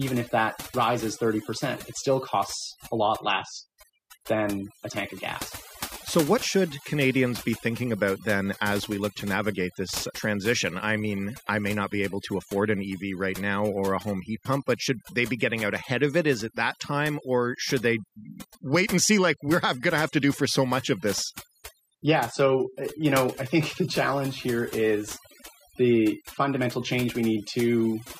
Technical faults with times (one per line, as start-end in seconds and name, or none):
0.00-28.20 overdone noise removal